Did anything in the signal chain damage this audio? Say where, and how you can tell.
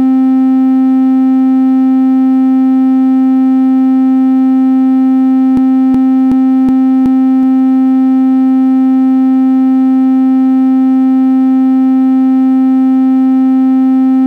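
Yes. At the driver or buffer stage there is a system hang loop: the driver stalled while the hardware kept replaying its ring buffer. From 5.57 to 7.43 s one 0.37 s slice repeats five times at 2.69 Hz. That repetition fits a 16384-sample buffer, and roughly two seconds of sound are lost.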